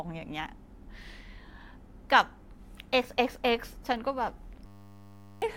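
Speech, interrupted near the end by a system hang loop: from 4.66 to 5.42 s the computer or audio driver stalled while the sound hardware kept replaying the same 10 ms stretch of its ring buffer, 76 times in a row. Because the looped piece is so short, it repeats at 100 Hz and comes across as a steady, flat buzz in place of the speech, and roughly 0.7 s of real audio is simply missing.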